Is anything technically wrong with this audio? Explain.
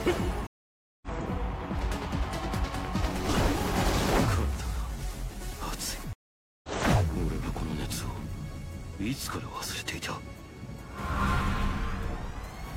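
Yes. Two stream reconnects occur, at 0.47 to 1.08 s and at 6.13 to 6.69 s. Each time the connection dropped and the player restarted its decoder mid-stream. The sound cuts to silence for about 0.55 s and then about 0.5 s, and resumes roughly 0.3 s and roughly half a second further on, skipping material.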